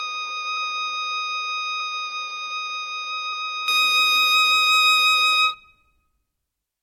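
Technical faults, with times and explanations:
0.00–3.68 s, input switched to a poorer device: the recording likely ran through a lesser input, so the music sounds dull, cut off above 6.3 kHz, about 10 dB quieter, with noise about 35 dB down, then clears without a gap.
0.56, 1.79, 3.32 and 5.53–5.55 s, compressed frames skipped: whole 23.2 ms frames never reached playback, so the music jumps ahead roughly 100, 100, 200 and 70 ms.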